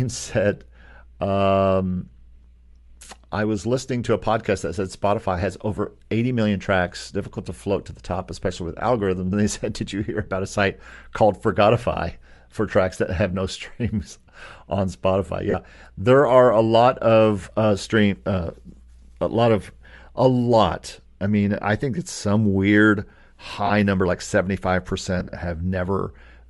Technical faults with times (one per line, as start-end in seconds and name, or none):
0.00-26.49 Bluetooth LC3 compression
5.76 lost LE Audio frames
15.51-15.54 lost LE Audio frames
23.66-23.71 lost LE Audio frames
25.20-25.32 lost LE Audio frames